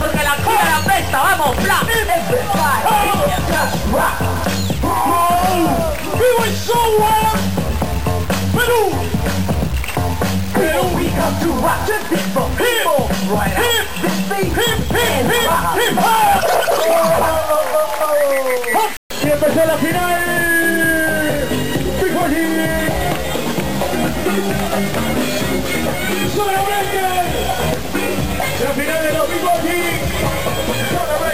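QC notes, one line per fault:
Throughout: low bit depth without dither, grainy distortion that rises and falls with the sound, likely from truncation to about 4 bits, leaving the error only roughly 15 dB below the signal.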